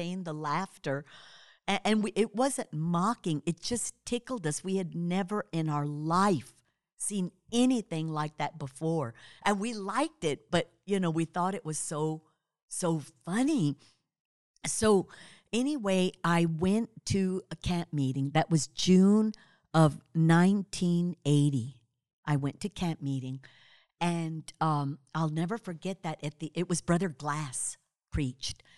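There are no technical faults to describe in time order in this recording.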